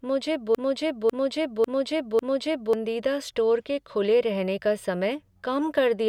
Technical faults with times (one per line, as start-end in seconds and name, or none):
0.00-2.73 broken-record loop